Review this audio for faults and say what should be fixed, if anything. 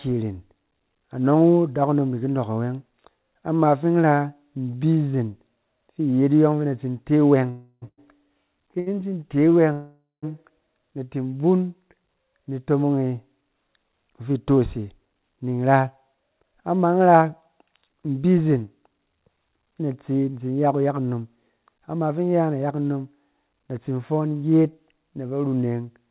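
At 7.5 to 7.84 s and again at 9.72 to 10.25 s the sound halts and its last fragment is drawn out as a fading buzz, about 0.32 s then about 0.5 s. The first decays to roughly 10 ms of silence, the second to 160 ms. Speech then resumes exactly where it stopped. These are call audio freezes, likely caused by packets held up in transit so the jitter buffer ran dry. A short stall only stretches a sound briefly; a freeze fades into quiet. Better network routing or a larger jitter buffer target would prevent them.

Short stalls from a late packet occur at 7.88 to 8.00 s and 8.80 to 8.88 s. A sound is held about 99 ms and then 68 ms too long, with a slight buzz or dip, and nothing is lost. Unlike a freeze, there is no fade to silence. Reducing packet jitter would prevent these.

From 14.5 to 19.29 s the audio runs about 10% fast, and from 20.66 to 21.37 s about 12% fast, with pitch unchanged. This is jitter buffer speed-up: the receiver trims pitch-period pieces to shed excess delay, roughly half a second in the first stretch and about a tenth in the second. 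A pitch-shift fault would also change the pitch. Smoother packet delivery would prevent it.

The audio is band-limited at 4 kHz, consistent with a 64 kbps G.711 A-law call path.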